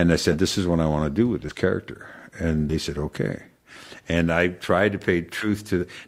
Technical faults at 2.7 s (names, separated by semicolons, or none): compressed frames skipped